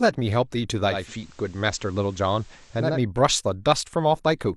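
At 0.83 s the speech undergoes digital radio blending to analogue. The receiver lost its digital stream and cross-faded to the station's FM broadcast over 314 ms. Hiss rises to roughly 30 dB below the speech. The level stays the same, so the change is heard as hissy speech. At 3.04 s the receiver blends back to digital.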